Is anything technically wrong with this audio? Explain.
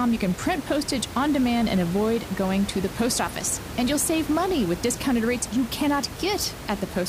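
No, nothing is technically wrong with this audio.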